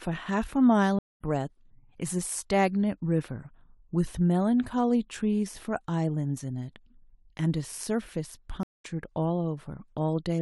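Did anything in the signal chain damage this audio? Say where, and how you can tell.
Yes, at the network and playback stage: a stream reconnect happens twice, from 0.99 to 1.22 s and from 8.63 to 8.86 s. Each time the speech drops to about 210 ms of silence and then resumes roughly a fifth of a second further on, so a piece of the speech is skipped. The connection broke, the player restarted its decoder mid-stream, and it rejoined the live feed later. On a waveform each event is a flat gap that starts abruptly and ends in a short fade-in, and on a spectrogram it is a blank vertical band.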